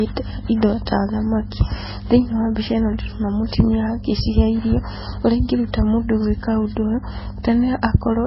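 Throughout the speech, the audio was likely a very low-bitrate MP3 that was later re-saved at a high bitrate: low-bitrate audio saved at a high bitrate. The re-encode cannot restore what was lost, so nothing remains above 5.6 kHz and the sound stays dull and muffled.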